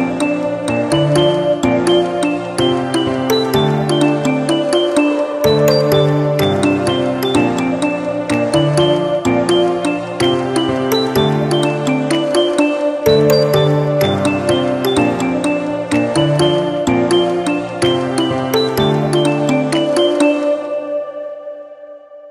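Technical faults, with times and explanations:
No technical faults can be heard anywhere in this recording of sounds. There is nothing here that calls for a time or an explanation.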